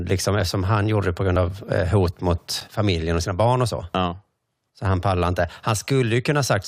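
At 0.40 s the speech drops for about 2.7 ms, a block of digital silence that fits a 128-sample buffer the program did not fill in time. It makes a sharp tick, and the waveform shows a flat near-silent run with abrupt edges.

At 1.36 s an overlap between stream segments, with segments 2 s long, cuts away a sliver of sound. The waveform jumps discontinuously, giving a tiny click or skip and a thin vertical line on a spectrogram.

Further blocks of digital silence, 8 ms at 2.60 s and about 4.6 ms at 3.94 s, each tick audibly, showing flat gaps with broadband vertical streaks at their edges.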